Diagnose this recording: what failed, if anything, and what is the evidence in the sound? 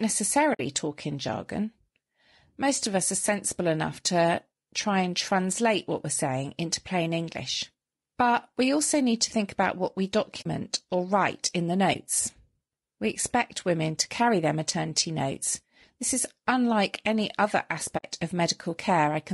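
Codec stage: the speech is rough and grainy throughout, with noise between harmonics. This is likely low-delay AAC compression at about 32 kbps, tied to the speech rather than added hiss.

Network into the codec: AAC frame loss with muting leaves soft-edged silent holes at 0.53 s, 10.41 s and 17.97 s and a brief dip at 11.93 s, lasting 20 to 60 ms. The decoder zeroed the missing frames, so the sound fades out and back in, unlike a hard dropout.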